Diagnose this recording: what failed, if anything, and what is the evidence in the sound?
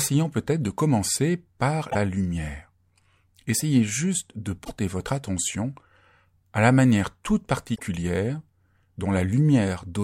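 The failure is in the codec stage: damaged data in the compressed stream. The speech is interrupted three times by short glitches, from 1.87 to 1.95 s, 4.61 to 4.71 s and 7.72 to 7.80 s, each about 80 to 100 ms long. In each case corrupted bytes caused the decoder to misread or discard frames, lose frame sync and scan forward for the next valid header before normal decoding resumed.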